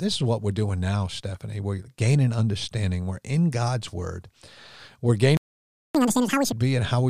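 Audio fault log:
5.37–5.95 s playback stall: the speech halts mid-flow and the output falls silent for about 0.58 s, likely because the player ran short of data or its thread was blocked. Unlike a dropout, nothing is skipped. The audio resumes at the point where it stopped.
5.95–6.52 s catch-up at higher speed: straight after the stall the speech runs at twice normal speed, raising the pitch by around ten semitones as the backlog is resampled. Unlike a plain pitch shift, tempo and pitch rise together, then both return to normal.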